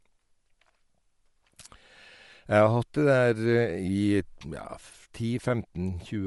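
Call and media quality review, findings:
Bluetooth LC3 compression, whole clip. Likely cause: LC3 encode in the LE Audio link, at a rate that fits roughly 48 kbps with 10 ms frames. Upper spectrum coarsely quantised and partly noise-filled. Result: speech carries a plainly audible breathy, grainy edge, no content above 11.6 kHz.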